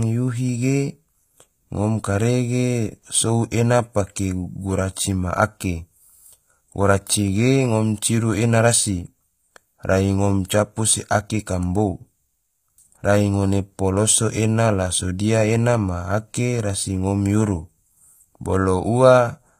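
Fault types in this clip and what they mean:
HE-AAC compression: The speech was likely encoded with HE-AAC v2, where only the lower part of the spectrum is really coded and the treble is rebuilt by patching lower bands upward under a coarse level envelope. The damage is plainly audible. The top end sounds synthetic, s sounds come out gritty and lispy, and nothing remains above 15.5 kHz. This fits a very low bitrate of around 24 kbps.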